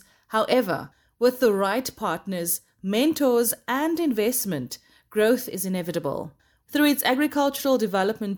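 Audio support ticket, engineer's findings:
No faults found on this one, just the speech coming through the way it should with nothing in the signal chain misbehaving.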